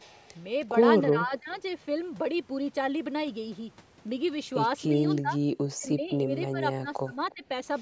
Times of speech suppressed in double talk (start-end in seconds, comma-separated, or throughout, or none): 1.11-1.55, 5.21-5.36, 5.72-7.45